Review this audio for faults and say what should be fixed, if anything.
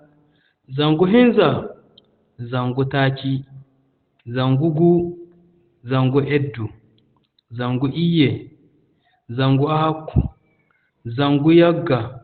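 Opus compression, likely in its speech (SILK) mode, affects the whole clip. The speech sounds muffled and hoarse, with nothing above 4.5 kHz, which fits about 16 kbps. Unlike MP3, it swirls less. Unlike a plain low-pass filter, the remaining band is also rough. Encode at a higher Opus bitrate so the encoder keeps full bandwidth and leaves its narrowband speech mode.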